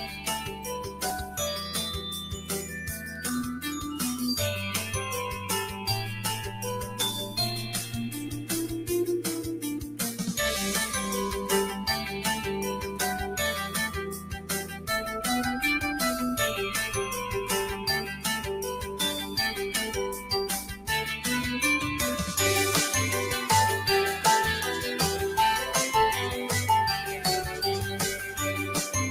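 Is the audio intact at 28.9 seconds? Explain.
No. At 28.9 s the sound is still under the noise suppressor applied to music or sounds, which runs through the whole clip. A suppressor built for speech is treating steady tones, ambience and reverb as noise. It pulls them down by roughly 10 dB, then lets them back up. Attacks pass through while sustained parts and decaying tails sink. The result is audible pumping and fluttering, and the sound thins out between onsets.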